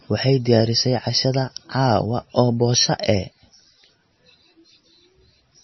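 Throughout the speech the sound is dull and watery, with nothing above 5.9 kHz, so s sounds lose their hiss and turn swirly and chirpy. The likely cause is heavy MP3 compression at a low bitrate, around 25 kbps. With so few bits, the encoder cuts the treble and lets weak frequency lines flicker between frames.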